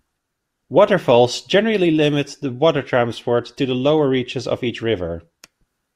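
No technical faults can be heard anywhere in the speech recording.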